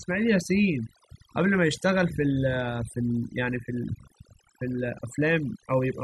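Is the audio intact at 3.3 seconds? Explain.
No. At 3.3 seconds the speech is affected by overdone noise removal, which runs through the whole clip. The noise reduction was set so aggressively that individual frequency bands near its noise estimate are pulled far down or cut, taking the softer parts of the speech with them. The background drops and breaks up into twinkling, warbling specks. Unlike a simple low-pass filter, high frequencies aren't removed uniformly; bands flicker in and out independently.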